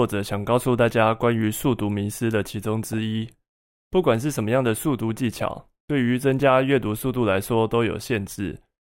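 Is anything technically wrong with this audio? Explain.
Yes. DAB burbling occurs at 2.93–2.98 s, 5.09 s and 8.04–8.19 s. Residual bit errors of a few hundredths of a percent slip past error correction into the MP2 data. Corrupted samples put short watery noise blips into single sub-bands over the speech.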